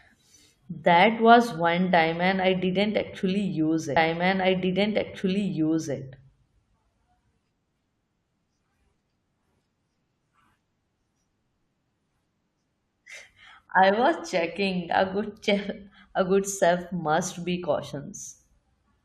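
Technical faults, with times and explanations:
3.96 to 5.96 s, stream segment repeated: about 2.0 s of the speech plays a second time, because the player queued or fetched the same chunk of the stream twice and then carried on. At the jump back there is a brief blip where the waveform breaks abruptly. On a spectrogram the pattern of formants and pauses from the preceding two seconds appears again, starting at 3.96 s, and a thin vertical click line marks the seam.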